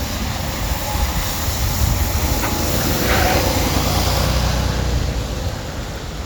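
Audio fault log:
1.36 s, 3.37 s, 5.39 s: overlapping chunks. Each new 2-second block begins 12 ms before the previous one ended, so that sliver plays twice and causes a brief stutter-click. Unlike a dropout, nothing goes missing, and the clicks are 2.012 s apart.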